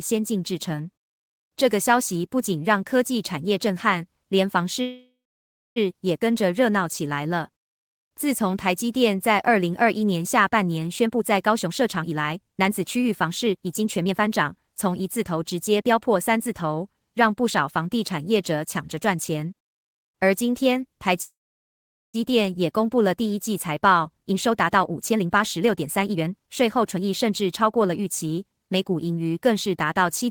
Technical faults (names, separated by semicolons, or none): call audio freeze; jitter buffer speed-up